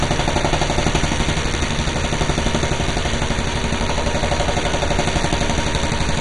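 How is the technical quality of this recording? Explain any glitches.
Technical quality is poor throughout, with heavy lossy-coding damage from start to finish. The sound is dull, with nothing above about 11.2 kHz, and carries a gurgling, granular texture as upper detail flickers in and out. The likely cause is MP2 compression at a low rate, which fits a bitrate around 56 kbps. The coder divides the spectrum into 32 equal bands and, short of bits, shuts off the top ones and coarsely quantises the rest, producing this warbling roughness.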